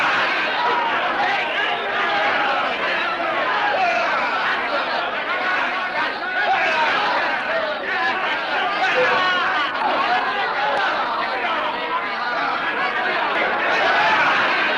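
A sound recording, with no technical fault to be heard anywhere in it. Nothing in the clip calls for a time or a cause.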